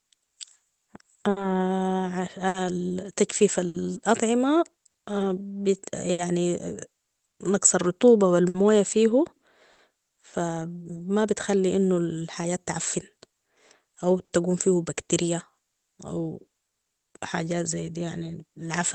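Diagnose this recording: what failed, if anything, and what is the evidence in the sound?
Through the whole recording the timing never quite settles: small hiccups keep arriving at uneven intervals, and the flow of the speech feels faintly unsteady. This is clock drift between sender and receiver, a network and buffer stage fault. The sender's clock runs roughly 5% slow relative to the receiver's, so the jitter buffer keeps draining and the receiver must keep patching and stretching to avoid running dry.

From 0.25 s to 9.80 s there are scattered short gaps. About ten brief ticks, smears and hiccups sit inside otherwise clear speech, the longest around 70 ms, and together they cover roughly half a second. Each comes from a packet lost or late on the network. The receiver covered each hole by extending the last sound.

From 10.83 s to 18.80 s the tempo sounds slightly dragged and uneven, with faint hiccups. 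These are repeated timing corrections in the jitter buffer. Because the slow sender keeps the buffer hungry, the receiver keeps inserting short stretched pieces. Playback runs at about 96% speed through this span, adding roughly 400 ms overall. All the edits lengthen the sound, but they are unevenly spaced.

At 14.25 s to 14.32 s one sound is held a touch too long, with a slight buzz or dip. This is a short stall from a late packet. Its arrival slipped by about 50 ms, so the buffer ran empty and the receiver stretched the preceding audio for about 50 ms until the packet came, then resumed from the same point. Nothing is lost. The Opus call codec, band-limited at 8 kHz, carries its usual coding texture throughout.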